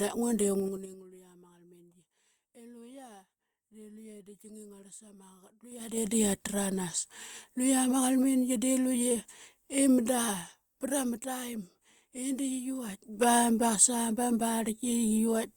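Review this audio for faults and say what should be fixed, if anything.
Zipper noise occurs three times in the speech, at 0.60–1.02 s, 5.63–6.14 s and 12.80–13.14 s. Gain moves in unsmoothed steps of about 5, 4 and 2 dB, roughly ten per second. Each step clicks audibly during a drop of some 25 dB, then rises of about 25 and 10 dB. To prevent it, interpolate gain per sample across each buffer so level changes ramp instead of jumping.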